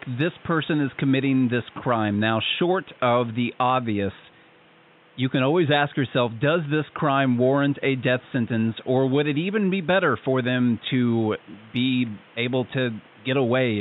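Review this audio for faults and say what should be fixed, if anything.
Nothing stood out on listening to this speech recording, and the faint room noise sitting about 30 dB below the speech belongs to the recording space rather than the system, so there is nothing here that needs fixing.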